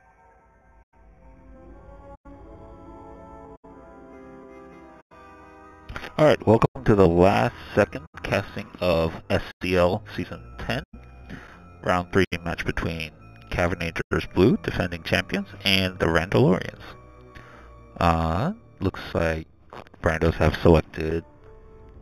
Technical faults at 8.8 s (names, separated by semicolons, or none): imaging from linear upsampling